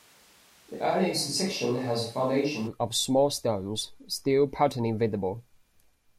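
A speech clip whose close microphone was likely lost, leaving a distant microphone from the start until 2.66 s: hollow, roomy, thin speech, similar level, room noise about 30 dB down, then abruptly close before "of small stones still".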